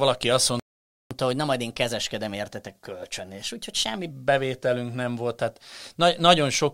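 At 0.60 s the speech just cuts out and stays silent until 1.11 s, a gap of about half a second (roughly 512 ms). That's a playback stall: the player most likely ran dry of data or had its thread blocked, so nothing reached the output until it recovered. The speech stops mid-flow rather than fading, which is what gives it away.

Right as the sound returns at 1.11 s, you get catch-up at higher speed. The player is chewing through its backlog by resampling, so everything runs at 1.1 times normal speed and the pitch lifts by about a semitone and a half along with it. It sounds like a slightly chipmunky, hurried stretch. That lasts for three seconds, through to 4.11 s.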